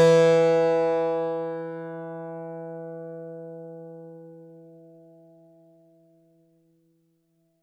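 No technical faults can be heard anywhere in this audio.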